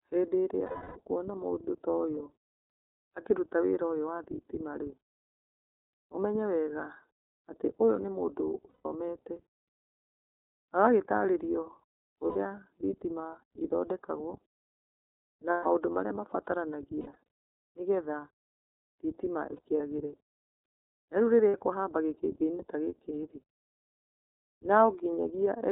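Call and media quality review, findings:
iLBC codec throughout: narrowband frame-independent coding, consistent with the 13.33 kbps, 30 ms mode. Nothing above 4 kHz, speech plainly rough and synthetic.

Lost iLBC frames: decoder concealment repeats the last pitch cycle plus noise, heard as a held buzzy vowel with immediate recovery. At 0.66–0.99 s, about 300 ms, before "mũndũ toyũ". At 8.70–8.86 s, 150 ms, after "atĩ ũyũ nĩ mũndũ". At 12.26–12.36 s, 90 ms, before "thitima ithondekagwo". At 15.51–15.67 s, 150 ms. At 17.00–17.16 s, 150 ms in bursts over 300 ms, longest run about 70 ms. At 19.56–19.81 s, 90 ms in short bursts over 240 ms. At 21.48–21.55 s, 60 ms.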